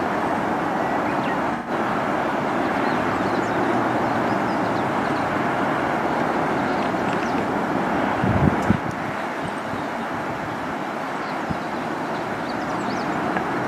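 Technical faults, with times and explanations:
1.55–1.70 s, 6.71–6.76 s and 11.23–11.29 s, AAC frame loss with concealment: the decoder lost data and filled the gaps by reusing the last good spectrum. The first gap is 128 ms, which fits about three frames, and sounds like a smeared, noisy patch. The later two are 43 ms each, a single frame, and are brief phasey blips.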